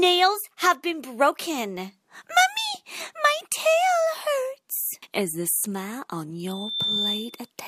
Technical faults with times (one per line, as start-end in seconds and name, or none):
6.47-7.50 loudspeaker feedback squeal